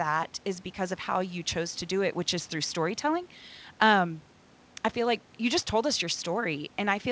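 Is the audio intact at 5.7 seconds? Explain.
Yes, at 5.7 seconds the speech comes through intact, with no dropout, glitch or distortion, only the narrowed bandwidth of the call path, which leaves nothing above 8 kHz.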